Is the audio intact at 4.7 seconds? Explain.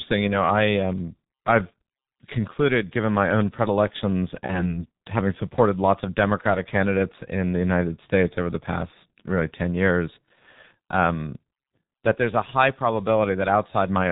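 No. At 4.7 s the audio is inside a stretch of VoIP packet loss concealed by the speech codec, from 4.46 to 4.79 s. A gap of about 30 ms went missing, which fits a single lost frame. The decoder filled it by extending its last pitch and filter settings with falling gain, so the sound smears into a buzzy tone or coloured noise that fades. Because each frame builds on the one before, it stays weak or distorted until about 4.79 s.

Under that, the G.723.1 codec applies here as it does throughout. It is heavily compressed at a rate that fits its 6.3 kbit/s mode, updates its voice model slowly, and passes nothing above 4 kHz. The speech is left muffled and hoarse, with blurred consonants.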